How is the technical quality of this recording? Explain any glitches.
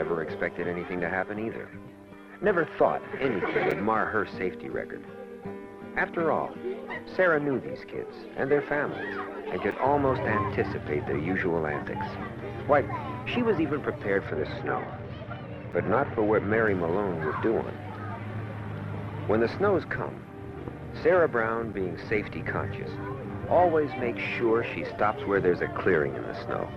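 The recording has two faults: short dropouts from gaps between chunks, and a muffled stretch from de-emphasis applied wrongly.

Gaps between chunks occur at 3.71, 9.71, 15.72 and 21.73 s. The audio was delivered in 6-second chunks, and each join leaves about 7 ms of silence, likely because each chunk starts late in playback or carries padding. No audio is lost, but the flow breaks at each join. Each gap is a brief hole, and the regular spacing makes them sound mechanical.

De-emphasis was applied wrongly from 14.27 to 16.68 s. A treble cut meant to reverse pre-emphasis was applied to audio that had none, or applied a second time. The result slopes smoothly downward so that 10 kHz sits about 10 dB below 1 kHz. For those 2.4 seconds the sound turns dull and muffled, as if heard through cloth. One of the chunk gaps, at 15.72 s, falls inside this stretch.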